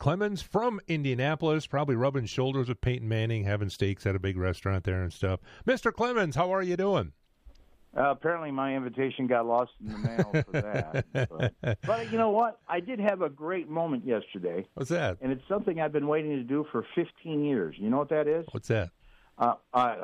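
No technical faults can be heard anywhere in the audio. Nothing in the sound points to a problem with how it was captured, processed or delivered.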